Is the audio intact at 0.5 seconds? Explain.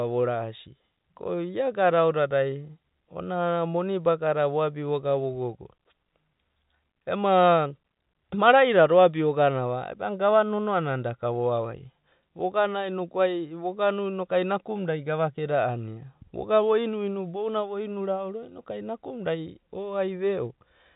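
Yes, the speech at 0.5 seconds is intact, with no dropout, click or distortion at that moment.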